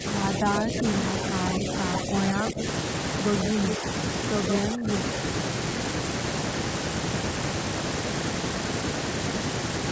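Speech, with short dips at 0.0, 0.42 to 0.84, 2.06 to 2.12, 2.36 to 2.63 and 4.72 to 4.89 s, sinking about 5 to 15 dB. This is likely speech suppressed in double talk, and the sound is turned down rather than cut out as in a dropout. At 3.7 s an echo leak, likely from a loudspeaker, returns a copy about 140 ms late and about 5 dB down, a distinct repeat rather than room reverberation.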